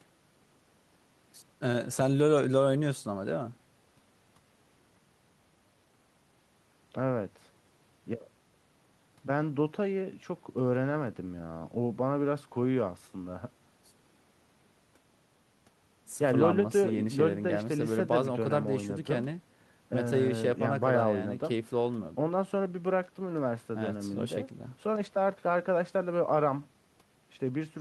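No technical faults turn up at any point in this speech recording.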